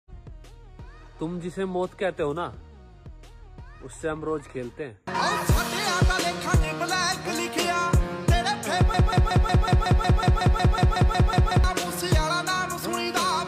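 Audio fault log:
8.94–11.64 s, broken-record loop: a fragment of about 184 ms repeats exactly, back to back, 15 times, so you hear a stuttering, machine-gun repetition for nearly three seconds. Likely the player or stream stalled and kept resending its last buffer, and whatever should have played there is simply gone.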